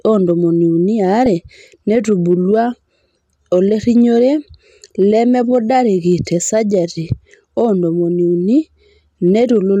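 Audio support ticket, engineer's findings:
Hard clipping, whole clip: speech level runs about 1 dB past what a gain or conversion stage can pass, so a small fraction of peaks are cut flat. Added high harmonics give brief crackle on the loudest syllables only, not continuous fuzz.

DAB burbling at 1.26 s and 6.34–6.39 s: weak reception lets a low rate of bit errors slip past error correction into the MP2 stream. Wrong samples put short blips of noise into single sub-bands over the speech.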